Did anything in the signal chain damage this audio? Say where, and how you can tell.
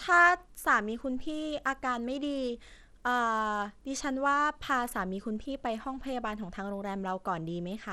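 Yes. Bluetooth SBC compression at the codec stage runs through the whole speech clip: the treble is thin and flickers in and out, and a gritty, grainy noise with aliasing rides on the speech throughout. This is likely SBC, the basic Bluetooth codec, which splits sound into a few wide sub-bands and has no hearing model. With a small bit pool, which fits a rate around 96 kbps, the top bands get few or no bits and the rest are coarsely quantised.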